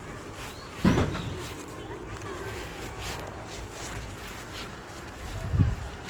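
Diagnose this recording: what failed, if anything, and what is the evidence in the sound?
The codec stage is the likely culprit: the whole clip carries plainly audible Opus compression artefacts, with the encoder apparently in its CELT music mode. Tonal parts of the sound turn grainy and rough rather than swirling, because starved bands are filled with noise or folded copies of lower bands. The bandwidth stays fullband, reaching about 20.1 kHz, which fits a rate near 24 kbps. On a spectrogram the upper bands look smeared and speckled instead of gapped.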